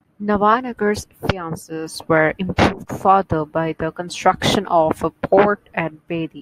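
Nothing in this speech recording stands out as a technical problem; there's no glitch, dropout or distortion to point to anywhere along the way.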